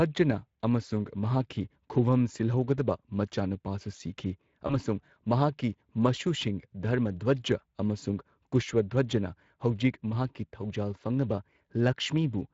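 Speex codec damage runs through the whole of this speech recording. It has a plainly audible noisy, hoarse texture, which fits a rate near 21 kbps. The CELP coder has too few bits to model the excitation faithfully, so the voiced sound comes out rough rather than clean. VoIP packet loss concealed by the speech codec occurs from 4.67 to 4.79 s. About 20 ms of audio was lost, which points to a single dropped frame. The decoder filled the gap by extending its last pitch and filter with falling gain, giving a brief, fading smear. The voice then takes a little longer to recover after packets resume.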